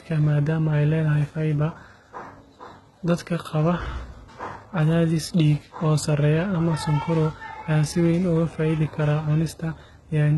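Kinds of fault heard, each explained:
HE-AAC compression: likely a heavily damaged low-bitrate encode; rebuilt treble makes s sounds gritty and metallic, and a spectrogram shows smeared copied bands ending abruptly at 11.8 kHz.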